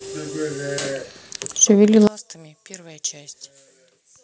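At 2.07 s, one channel inverted in polarity is the likely fault, so whatever the two channels share cancels when they are summed to mono. From there to the end, the centred speech falls by about 20 dB, leaving only a faint residue of the difference between the channels.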